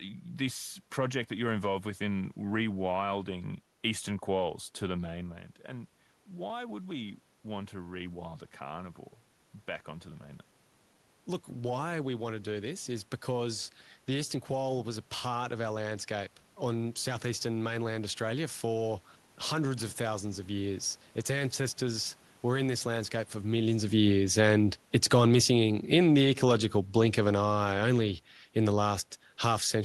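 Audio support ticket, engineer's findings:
Automatic gain falling, 23.88 to 28.9 s: AGC judged input too loud and ramped gain down by about 6 dB. Speech and background sink together after "this landscape for millions".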